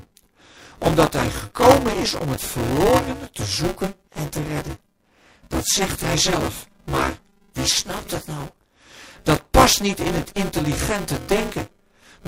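All the way through the speech there's buffer tearing: a steady robotic buzz at 200 Hz, present only while someone's talking. The writer and reader have slipped, so roughly a third of each 5 ms buffer replays audio from about 20 ms earlier, with hard joins either side.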